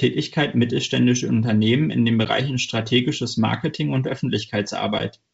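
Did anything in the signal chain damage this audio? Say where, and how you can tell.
Yes, packet loss on an ADPCM call, at the network stage: hard-edged 10 ms holes at 2.25 and 4.99 s, then briefly distorted speech while the decoder's predictor resyncs.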